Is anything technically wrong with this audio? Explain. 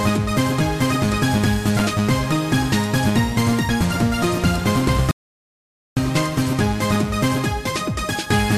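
Yes, there are two kinds of fault. Loose connector crackle appears twice, from 1.77 to 1.85 s and again from 6.17 to 6.33 s. Each is a short, irregular burst of scratchy crackle. A worn or dirty contact is rapidly making and breaking as it shifts, chopping the signal on and off, and any DC on the line turns each break into a small pop. Clipping distortion follows the loudness of the sound. This crackle is ragged and random and does not track the sound's level.

An audio dropout to silence runs from 5.11 to 5.97 s, losing about 0.86 s of material. The sound stops mid-flow and returns just as abruptly. The gap is dead silence with no room tone underneath, which is what sets it apart from a quiet passage or a heavy noise gate. The input was likely lost briefly, through a disconnected link or a momentary mute, while the recorder kept writing silence.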